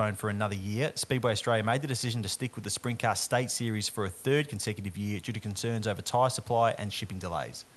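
No technical faults can be heard in this speech recording. The call path comes through with the high frequencies rolled off at about 12 kHz, consistent with Opus coding, and faint room noise sits roughly 32 dB below the speech.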